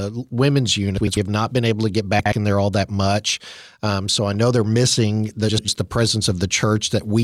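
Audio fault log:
0.98–1.17 s, 2.19–2.33 s, 5.49–5.68 s: frames out of order. Adjacent 96 ms blocks (64 ms at 2.19 s) are swapped, just before "have not been able", between "been able to get" and "in there all that", and after "know they're missing the". Each swap gives a garbled flutter, with vertical spectrogram breaks and waveform steps at the three joins.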